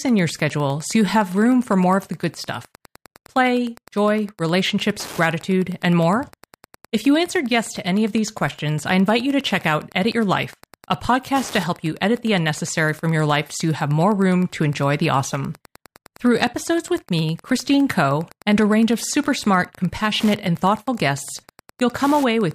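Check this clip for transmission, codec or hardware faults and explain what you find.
One hardware fault runs through the whole recording. Wi-Fi interference ticks about ten times a second, every 102.4 ms, roughly 25 dB below the speech. A nearby Wi-Fi radio's periodic beacon is rectified by the audio circuit into evenly spaced clicks. Unlike GSM buzz, this is a slow, countable tick, not a rapid buzzing drone.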